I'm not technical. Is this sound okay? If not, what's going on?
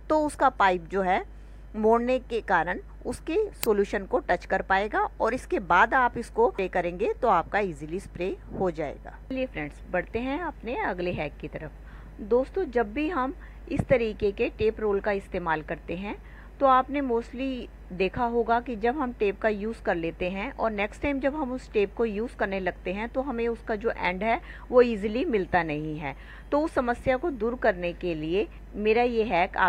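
No, there are two problems. A mains hum runs through the whole clip: a steady low 50 Hz drone, fairly noticeable, likely from electrical power leaking in through a ground loop or nearby transformer. At 3.64 s there's an uninitialised buffer, a tiny, loud digital crack where the system played leftover memory before any real audio had been written there.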